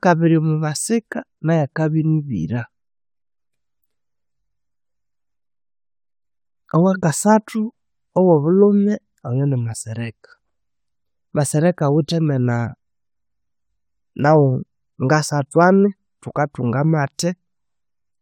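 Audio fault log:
No technical faults can be heard anywhere in this speech recording; the signal stays continuous and stable throughout.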